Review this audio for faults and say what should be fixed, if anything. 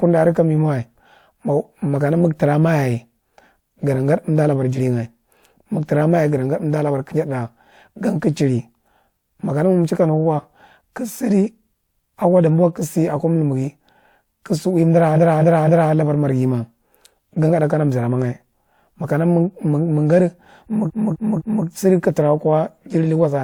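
Stutters at 15.15–15.91 s (after "ka si udi unda", before "labar marghi") and 20.86–21.63 s (before "sidi ka"): a 256 ms block replays three extra times, adding 768 ms each. These are repeated frames, where a run of compressed frames was sent or written more than once. To prevent this, drop duplicate frames by sequence number before decoding.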